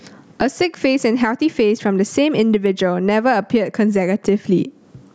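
Gain pumping runs through the whole speech recording, with the level swinging by roughly 25 dB. The likely cause is input gain set far too high for the microphone, with a fast limiter or compressor clamping down on every loud syllable. Quiet and loud passages sit unnaturally close in level, giving a squashed sound.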